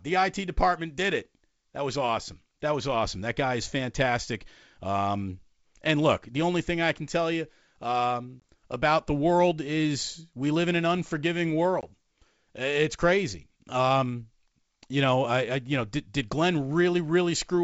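Speech carried over G.722 wideband coding drops out twice in hard-edged gaps, after "can tell you um" at 8.40 to 8.42 s and after "live in an unforgiving" at 11.81 to 11.85 s. Each gap is followed by briefly distorted speech. This is packet loss on an ADPCM call. About 20 ms of audio, roughly a couple of packets, goes missing each time, and the decoder's adaptive predictor loses step with the sender's before settling again.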